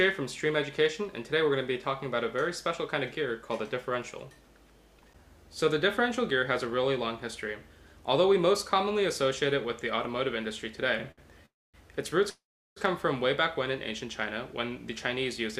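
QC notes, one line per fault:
11.11 to 11.20 s, short stall from a late packet: a packet arrived after it was due and the jitter buffer ran dry, so the receiver stretched the last sound for 62 ms before resuming in place. Nothing is lost, but the sound hangs slightly long with a slight buzz or dip.
11.46 to 11.76 s and 12.30 to 12.78 s, call audio freeze: packets were likely held up in transit, emptying the jitter buffer. The last sound carries on as a fading buzz or hiss, then silence (250 ms and 360 ms silent within 281 ms and 467 ms of fill). Audio then resumes where it stopped, delayed rather than cut.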